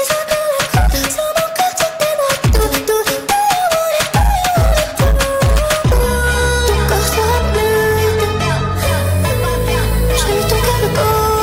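Hard clipping runs throughout: the audio is pushed about 10 dB past the limit, flattening around a tenth of samples into harsh fuzz, unlike soft saturation's rounded warmth.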